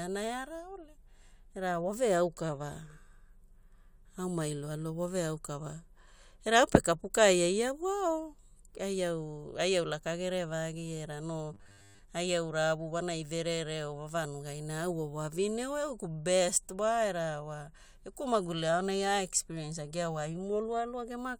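At 11.54 to 12.00 s, new audio likely stopped arriving on time, so the software kept replaying a short buffer of about 10 ms for most of this stretch. That produces robotic sound from repeated short buffers: a rigid, metallic 100 Hz buzz that only loosely tracks the speech.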